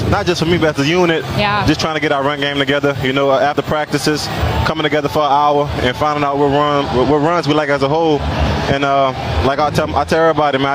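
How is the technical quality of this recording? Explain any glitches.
The recording suffers from gain pumping that runs through the whole clip. The level swings by roughly 15 dB. The likely cause is input gain set far too high, with a fast limiter or compressor clamping down on each peak and releasing in the pauses. Loud and quiet passages end up squashed close together. The result sounds flattened.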